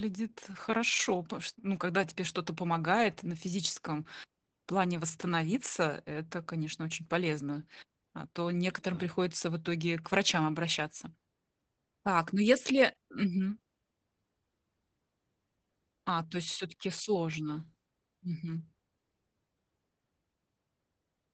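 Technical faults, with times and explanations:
Throughout: Opus voice compression. The speech is plainly muffled and slightly hoarse and robotic, with nothing above 8.8 kHz. The coarse, band-limited sound fits Opus in its SILK linear-prediction wideband mode at a low bitrate around 12 kbps, where the excitation is coded only roughly.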